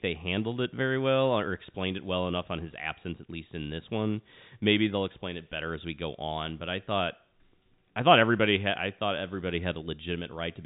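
No technical faults are audible.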